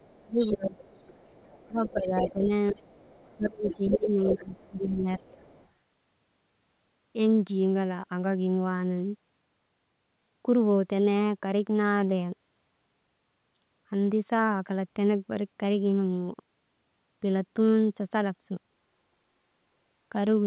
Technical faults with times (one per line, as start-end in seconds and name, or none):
0.00-4.68 other side's voice leaking through
0.15-0.78 speech suppressed in double talk
1.68-2.85 speech suppressed in double talk
3.35-5.22 speech suppressed in double talk
5.19-5.68 other side's voice leaking through